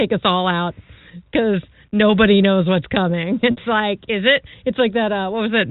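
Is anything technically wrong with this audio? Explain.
Yes. Packet loss with pitch repetition occurs from 3.51 to 3.57 s, just before "like is it". About 60 ms of audio went missing, which fits two lost packets. The receiver filled the hole by repeating the last pitch period and tapering it off. At this short length the result is a brief held, slightly buzzy tone in place of the missing sound. The G.711 telephone band can still be heard around it.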